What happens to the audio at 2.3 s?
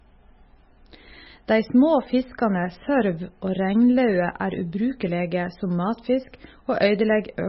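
At 2.3 s the speech carries the same MP3 compression damage heard through the whole clip, with nothing above 5.6 kHz and a watery, swirling texture. The likely cause is an encoder short of bits, which fits a very low bitrate around 18 kbps. It discarded the top band at a fixed cut-off and zeroed weaker frequency lines that flicker between frames. The damage is heavy, so sibilants turn metallic and dull and consonant onsets smear.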